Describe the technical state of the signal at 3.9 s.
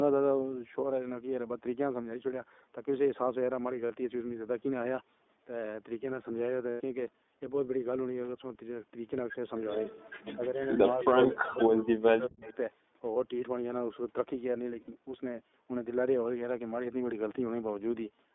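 Lost iLBC frames occur from 3.86 to 3.92 s, a gap of about 40 ms that fits two dropped 20 ms packets. The decoder filled it by repeating the last pitch cycle blended with noise, so the speech briefly becomes a held, faintly buzzy vowel before recovering almost immediately.

The iLBC codec also shapes this moment. Each 20 ms frame's excitation is coded independently, within a band of roughly 250 Hz to 3.6 kHz. The result is a plainly rough, slightly synthetic texture consistent with the 15.2 kbps mode.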